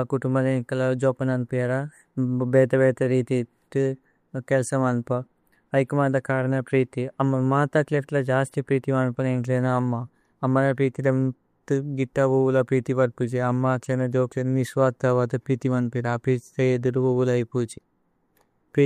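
No technical faults can be heard in this speech recording.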